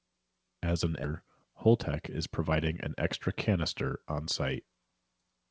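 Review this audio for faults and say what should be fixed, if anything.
Skip ahead, 1.04 to 1.06 s: playback jumps forward with no fill, so about a second of the speech is simply gone and the audio on either side is butted together almost seamlessly. This happens when a stretch of packets is discarded, either lost on the way or flushed when the jitter buffer overflowed, while later audio was already queued, and the delay drops by roughly that second at once. Preventing it means sizing the jitter buffer and its overflow handling so that late bursts are absorbed and compressed gradually rather than thrown away wholesale.

Jitter buffer speed-up, 1.13 to 2.53 s: right after the jump, the speech runs at about 106% of normal rate while pitch stays unchanged, giving a slightly hurried delivery. The receiver was still holding more audio than its target after the burst, so it trimmed short pieces of one or a few pitch periods, over and over, removing around a tenth of a second in total to bring latency down. 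The audio is band-limited to 8 kHz, which fits a G.722 wideband codec. Preventing it means smoothing network delivery so packets arrive steadily, letting the buffer drain at a gentler rate or over a longer stretch.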